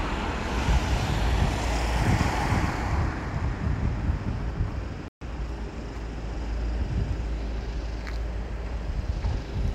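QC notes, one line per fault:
2.19–4.51 s, doubled audio track: a full-band copy trails roughly 0.4 s behind at a few dB lower, dry, with no decay and abrupt start and end. It is likely a second out-of-step copy, unlike a room echo.
5.08–5.21 s, Bluetooth stall: the sound cuts to 130 ms of full silence, then resumes. This is likely a wireless buffer running dry, unlike a codec dropout.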